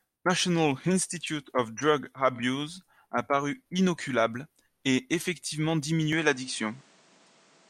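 At 6.13 s the speech abruptly loses its top end, with nothing above 9.8 kHz, shifts a few decibels in level and gains faint new background noise, with no gap at the change. The input likely switched to a poorer device.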